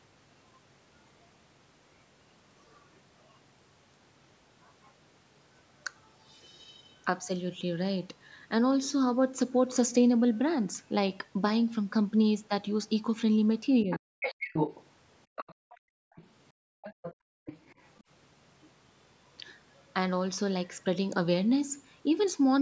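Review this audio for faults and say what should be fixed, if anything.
Speech suppressed in double talk: between 13.84 and 14.12 s the talker's speech sinks sharply, falling by roughly 40 dB at its deepest and losing about a fifth of a second in total, just as a second voice enters. The likely cause is the echo canceller failing to separate the talker from the loudspeaker echo and attenuating both. On a waveform the envelope pinches to near silence. On a spectrogram the harmonics fade or break into gaps across the band, which tops out at 8 kHz here as expected for call audio. Prevention: use a double-talk detector that holds off attenuation when near-end speech is present.

Other side's voice leaking through: a second voice is audible from 13.91 to 16.26 s at a high level, only about 5 dB below the talker, and again from 16.83 to 18.03 s, fainter at about 15 dB down. This residual points to loudspeaker echo reaching the microphone without being fully cancelled. 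On a spectrogram it shows as a second set of harmonic traces overlapping the talker's. On a waveform it fills the gaps between the talker's syllables. Prevention: improve echo-path modelling and residual echo suppression, and reduce loudspeaker volume or coupling.

Background gated by the echo canceller: from 15.54 to 17.46 s the room sound is pushed down hard, by about 40 dB at the deepest point, for roughly a second in total, then returns. This happens while the far-end audio is playing, as the canceller clamps the microphone. On a waveform the noise floor drops abruptly to flat silence between events. On a spectrogram the broadband background texture blanks out in vertical-edged holes. Prevention: replace hard gating with comfort-noise insertion and gentler, smoothed suppression.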